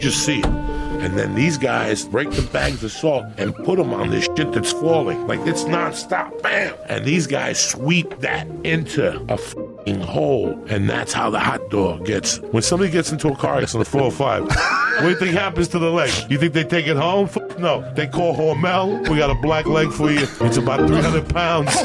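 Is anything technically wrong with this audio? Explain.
No, nothing in the signal points to a technical fault, with no disturbances, dropouts or distortions heard anywhere in the audio.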